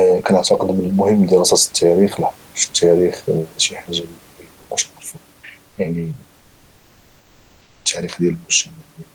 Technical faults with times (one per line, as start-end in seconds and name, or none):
4.61-4.69 comfort noise in place of the background
5.69-5.77 comfort noise in place of the background
6.37-7.85 comfort noise in place of the background